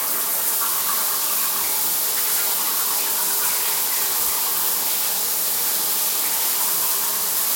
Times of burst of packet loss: none

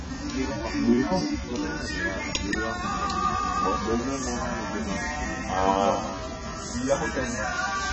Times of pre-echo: none

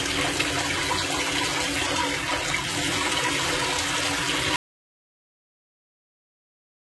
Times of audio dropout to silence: 4.56-6.91

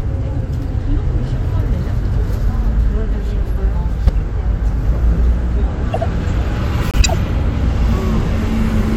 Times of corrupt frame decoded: 4.07-4.10, 5.93-6.03, 6.91-7.15

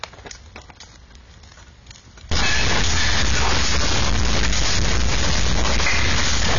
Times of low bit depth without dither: 2.31-6.59

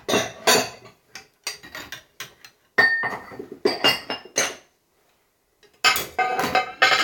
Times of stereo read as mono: none

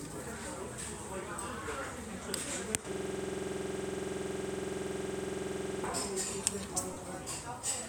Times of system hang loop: 2.92-5.84

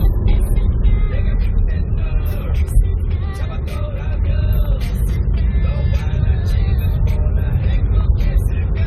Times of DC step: none

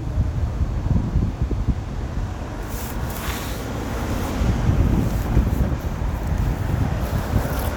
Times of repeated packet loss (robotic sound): none

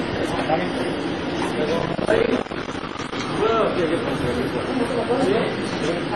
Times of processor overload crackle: 1.79-3.12

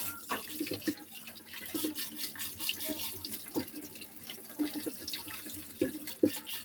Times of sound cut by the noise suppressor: 1.06-1.49, 3.93-4.58

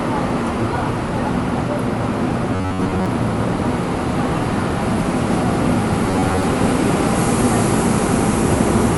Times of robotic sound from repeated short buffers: 2.53-3.06, 6.07-6.43

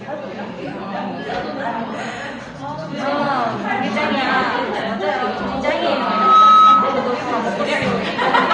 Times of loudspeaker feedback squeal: 5.88-7.17

